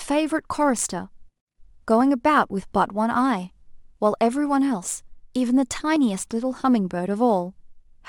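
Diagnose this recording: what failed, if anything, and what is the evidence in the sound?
Converter: sample clock jitter, roughly 2 µs, adds a hiss-like roughness at about -35 dB below the speech. It grows on loud, bright passages, because timing error scales with waveform slope.

Playback of the segmented stream: an overlap between stream segments produces tiny skips at 2.00, 3.97 and 5.96 s. These fall on 2-second segment boundaries, where a few milliseconds are trimmed and the waveform jumps.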